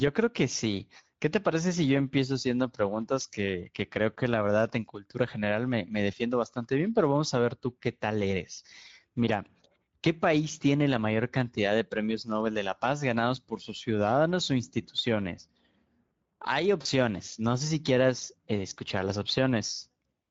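Speech, carried through the Speex codec, with plainly audible codec damage from start to end. Speex is a CELP coder. At this setting it has few bits to describe the excitation, so the voice sounds hoarse and grainy, with a noisy edge. The damage points to a mid-range bitrate of roughly 17 kbps. Any content above 4 kHz is only a shaped noise fill, not real detail. At 16.81 s to 16.87 s there is a brief gap handled by VoIP packet loss concealment in the speech codec. About 40 ms of audio went missing, which fits two lost 20 ms frames. The decoder filled the hole by repeating its last pitch and filter settings, lowering the gain each frame. The result is a short stretched sound that fades. The sound then recovers slowly, because each new frame builds on the disturbed state before it.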